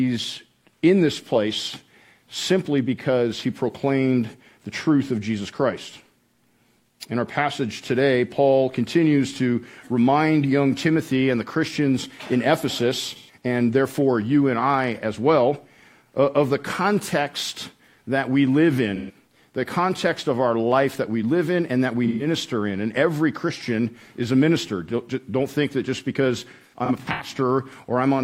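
At 13.15, 18.95 and 22.07 s, AAC frame loss with concealment leaves short smeared, noisy patches of about 130 ms each, consistent with three lost frames filled from the last good spectrum. From 26.51 to 27.30 s, losses scatter across roughly 0.7 s, the longest run roughly 150 ms, so the sound breaks into a cluster of smeared, noisy patches. Spectrograms show blurred, harmonically flattened smudges there.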